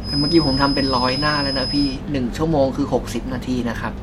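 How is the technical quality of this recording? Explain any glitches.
There's one real problem here. From the start to 2.0 s a feedback whistle sits at 5.1 kHz, only a few dB under the speech: a thin, slightly wavering tone, likely from a speaker-to-mic loop hovering right at the edge of feedback.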